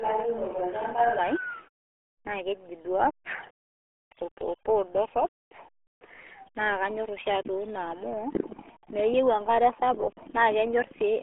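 From the very start until 1.19 s, the speech sounds roomy and hollow, with thinner bass and faint room noise well below the voice, though the level barely changes. Then it abruptly turns close and dry. This is likely a switch to a distant microphone, already under way when the clip begins.

Throughout all the speech, the sound is muffled and gargly, squeezed into a narrow band of roughly 300 Hz to 3.4 kHz with nothing above 3.8 kHz. This is the RealAudio 14.4 codec, an 8 kbit/s dial-up speech codec whose heavy compression strips the highs and smears the voice.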